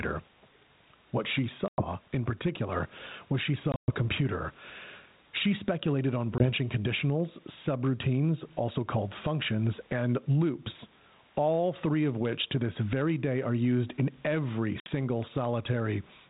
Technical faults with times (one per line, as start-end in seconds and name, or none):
0.00-16.29 gain pumping
1.68-1.85 packet loss on an ADPCM call
3.72-3.95 packet loss on an ADPCM call
6.38-6.46 packet loss on an ADPCM call
14.80-14.88 packet loss on an ADPCM call